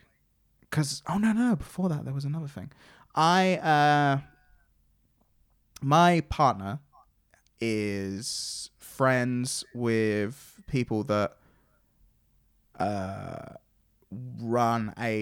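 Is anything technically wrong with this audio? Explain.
No, no technical faults found.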